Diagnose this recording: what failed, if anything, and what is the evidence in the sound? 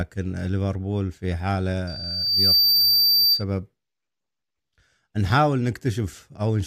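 Loudspeaker feedback squeal in the acoustic loop between mic and speaker, from 1.87 to 3.44 s. A 4.7 kHz tone swells over well under a second to a few dB above the speech. The loop gain at that frequency passed unity and the tone kept regenerating.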